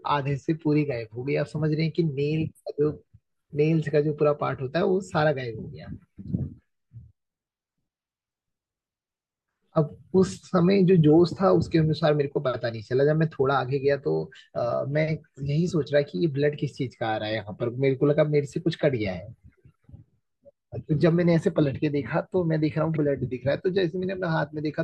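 At 22.95 s the speech jumps abruptly forward, marked by a brief blip, and the flow does not continue from where it left off. This is most likely a stream segment skipped: one chunk of the segmented stream failed to arrive or load, and the player carried on with the next chunk instead of waiting. The passage that belonged in that segment is simply absent, and the join between the two surviving segments produces the short discontinuity.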